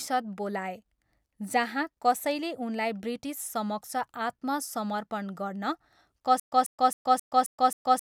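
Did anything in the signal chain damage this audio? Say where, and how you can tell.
Yes, at playback: from 6.40 s to the end there is a stutter with silent gaps. The same 143 ms fragment of speech repeats six times, every 266 ms, with 123 ms of digital silence between. Unlike random dropouts, it is identical and evenly paced, likely from a stalled stream replaying its last buffer.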